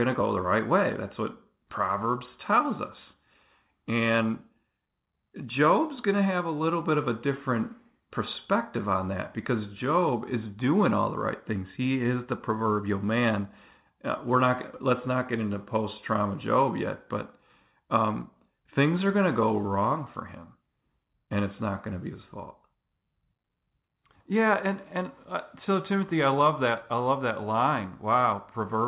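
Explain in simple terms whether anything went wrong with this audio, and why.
Nothing stood out on listening to this speech clip, which sounds like an ordinary phone call with its sound limited to below about 4 kHz as such calls normally are.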